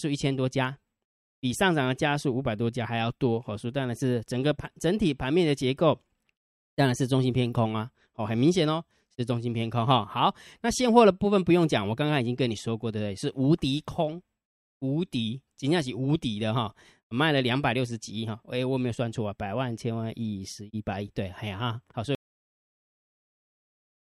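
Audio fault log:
22.15 s to end: cut-off end. The final buffers of the recording were never written to the file, so the stream stops partway through a sound rather than finishing it. At 22.15 s the speech breaks off abruptly and the audio falls straight to silence, with no natural decay, release or room tail. What remains of the clip after that point is empty, which makes the ending sound chopped rather than faded or completed.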